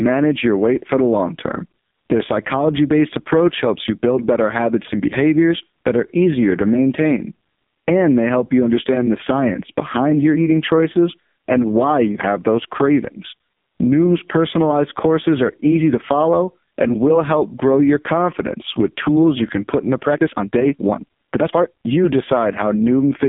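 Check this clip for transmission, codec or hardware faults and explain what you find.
There are two faults: the whole thing has been through a low-rate mobile speech codec, and there's a short sped-up stretch near the end.

The AMR narrowband mobile codec runs through the entire clip. The sound sits in a telephone band of roughly 150 Hz to 3.6 kHz with nothing above 3.7 kHz. It seems to be running at 5.15 kbps, close to the bottom of AMR-NB's range. At that rate the codec models the vocal tract with only a handful of excitation pulses per subframe, so the voice comes out heavily damaged: buzzy, thin and noticeably synthetic.

The time-stretched section runs from 20.04 to 21.92 s, just after "you can put into". The pace suddenly jumps to about 1.81 times normal while the pitch stays put, so the speech sounds rushed before settling back. That pattern likely comes from software squeezing the audio to fit a length, dropping short pieces to keep the pitch steady.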